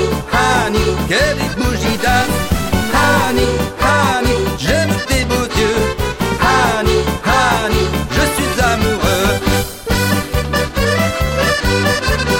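Between 1.88 and 3.38 s, samples were likely truncated to 5 bits without dither; this low bit depth adds grainy, signal-following distortion about 15 dB down.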